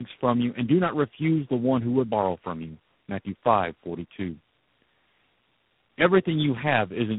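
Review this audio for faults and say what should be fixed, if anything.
Tandem speech coding runs throughout: the speech sounds rough, muffled and warbly, with nothing above 3.9 kHz. That compounded smearing, worse than any single low-rate codec or a plain band limit would produce, fits three speech coders in a row, each re-encoding the previous one's output. To prevent it, keep the call in one codec end to end, or pass it through untranscoded at network borders.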